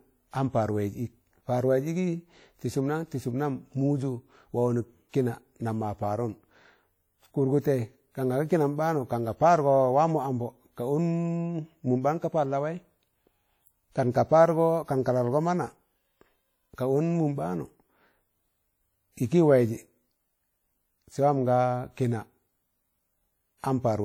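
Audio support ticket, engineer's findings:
Speech, full length, start to end: plainly audible codec damage, ringing and washy texture, hiss rising and falling with the signal. Likely WMA compression: long transform blocks smear quantisation noise across tens of milliseconds; weak spectral lines dropped. Damage level fits a bitrate around 48 kbps. Nothing above about 20.1 kHz. Re-encode at a higher bitrate or use another codec.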